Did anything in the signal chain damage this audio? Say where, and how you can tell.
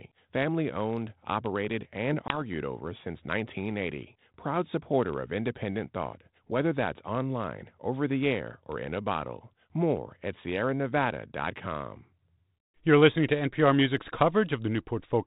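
Yes. Packet loss on an ADPCM call, at the network stage. Just after "family owned operated and", at 2.28 s, a hard-edged 20 ms hole appears. The decoder's predictor and step size then lose sync, so "over since" returns slightly distorted, settling by 2.41 s.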